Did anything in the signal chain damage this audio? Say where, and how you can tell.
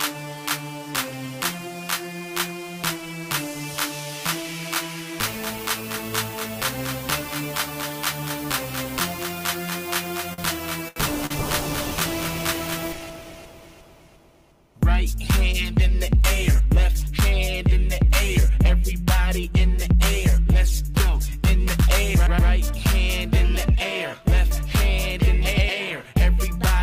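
Yes: repeated stalls (stutter) from 10.33 to 11.32 s, four network jitter-buffer underruns, the longest 78 ms, padded by stretching the preceding sound, so it drags without losing anything.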